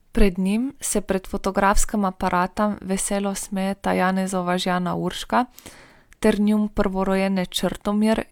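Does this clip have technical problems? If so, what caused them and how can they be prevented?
No, nothing stood out as a technical problem when listening to this speech clip.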